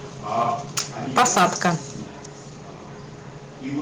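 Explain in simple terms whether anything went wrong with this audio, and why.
Two problems can be heard. Microphone overload hits at 0.77 to 0.79 s and again from 1.17 to 1.7 s. The loudest peaks are chopped flat, giving a harsh crackle, likely because the input was set too high.

A microphone volume step-down follows at 1.18 s. The level drops suddenly and slightly, likely because the software turned the microphone down after that distorted peak.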